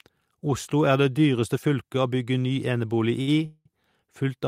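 At 3.21 s the speech hangs for about 60 ms, up to 3.29 s: a short stall from a late packet. The next packet missed its playout slot, so the jitter buffer emptied and the receiver held the last sound in place until the data turned up, leaving a brief smeared sustain with a faint buzz. Playback then resumes from the same point, so nothing is lost, but everything after it runs 60 ms later than before.

A longer call audio freeze follows from 3.45 s to 3.67 s. Here the sound is drawn out into a decaying buzz for about 200 ms, and the final 20 ms drops to silence before the speech picks up exactly where it stopped. The likely cause is packets delayed in transit long enough to drain the jitter buffer completely. No audio is missing; instead a gap has been inserted, adding another 200 ms of delay to the rest of the clip.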